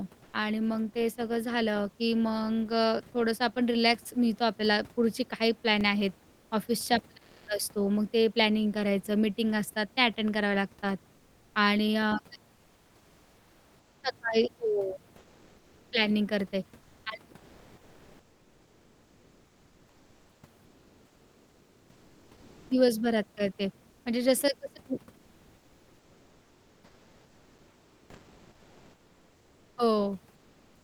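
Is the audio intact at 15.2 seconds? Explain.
No. From 15.17 to 15.91 s the room's background noise gives way to a flat, featureless hiss about 1 dB quieter. This is comfort noise in place of the background, likely from discontinuous transmission synthesising filler noise during the pause.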